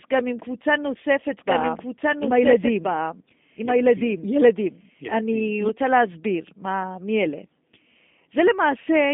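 Speech through a G.729 codec for its whole length: band-limited to about 200 Hz–3.7 kHz, nothing above 3.8 kHz, with audible roughness consistent with 8 kbit/s pulse-coded telephony.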